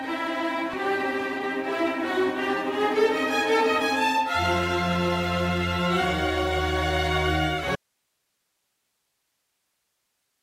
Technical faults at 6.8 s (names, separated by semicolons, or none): none